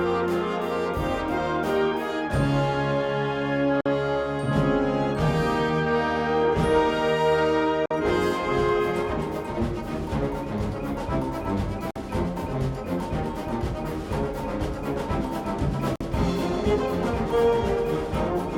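Four short, hard-edged holes of silence break the sound at 3.81, 7.86, 11.91 and 15.96 s, each lasting 50 ms and recurring about every 4.05 s. This is a gap between chunks: the audio was handled in 4-second blocks, and a 50 ms stretch of silence was left at each join, likely from codec padding or playback starting each block late. Nothing is dropped; the sound simply pauses and resumes.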